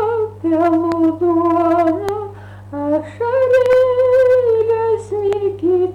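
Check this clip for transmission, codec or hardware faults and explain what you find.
There are four loud pops, all hardware-type faults. They fall at 0.92–0.94 s, 2.09–2.11 s, 3.66–3.75 s as a double pop, and 5.33–5.35 s. Each rises about 10 dB above the sound, which continues underneath. A likely cause is a voltage spike from a switch, plug, static or driver glitch.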